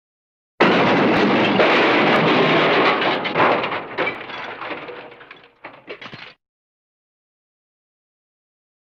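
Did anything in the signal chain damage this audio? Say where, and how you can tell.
Yes, at the driver/buffer stage: periodic USB or driver dropouts, ticks every 0.99 s from 0.18 to 8.12 s, each skipping roughly 10 ms of audio.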